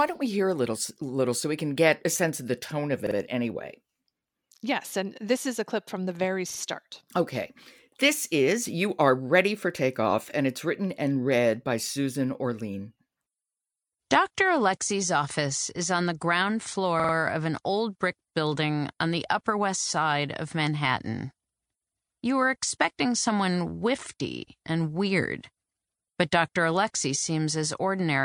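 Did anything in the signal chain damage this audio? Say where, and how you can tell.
Yes: a repeated buffer at the driver stage. Playback starved and replayed its last 46 ms block, which fits a 2048-sample buffer. This gives hard-joined stutters after "of the tone of" (3.07–3.16 s), "clip from the very" (6.50–6.60 s) and "is on the ground" (17.00–17.14 s).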